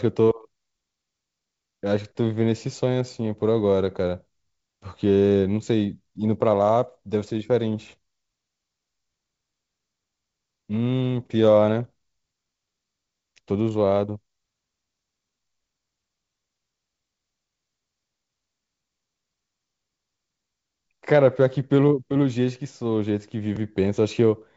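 No technical faults can be heard in this speech.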